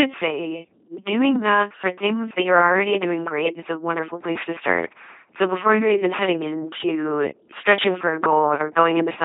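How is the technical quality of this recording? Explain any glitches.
The technical quality is poor. From start to finish, the speech is heavily damaged by an LPC-10 vocoder. The voice sounds buzzing and mechanical, like a robot, with harsh buzz or hiss wherever voiced and unvoiced sounds are misjudged, and nothing reaches above 3.8 kHz. The coder rebuilds each short stretch from a simple resonant filter driven by either a pulse train or noise, never a blend, so natural breathiness and texture disappear. The damage fits a 2.4 kbit/s coder.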